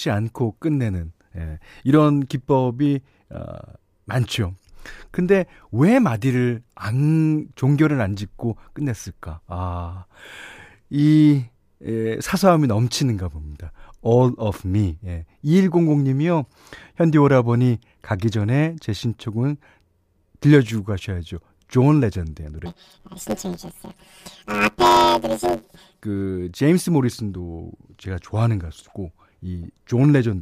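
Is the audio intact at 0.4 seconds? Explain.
Yes, the audio is intact at 0.4 s, with no dropout, click, distortion or other fault at that moment.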